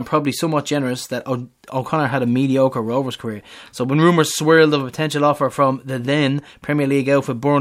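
No faults are audible anywhere in the recording.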